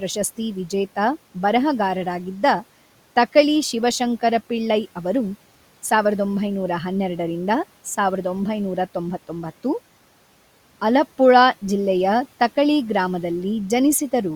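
Nothing stood out on listening to this speech, with only the room's own background sound sitting about 26 dB beneath the talking.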